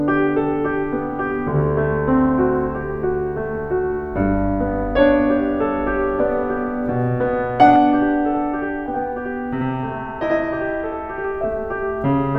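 From 7.76 s to 11.24 s the music takes on a channel delay (doubling): one channel lags the other by about 85 ms, consistent with a 4096-sample buffer, and the mono sum plays both. The late copy sounds like an equal-level slap echo trailing every attack.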